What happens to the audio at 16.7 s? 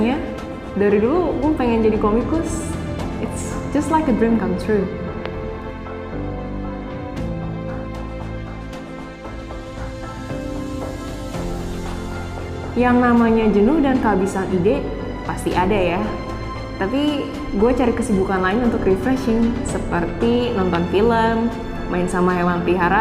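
Nothing goes wrong at 16.7 s; the audio plays through that moment intact, with no dropout, click, glitch or other fault.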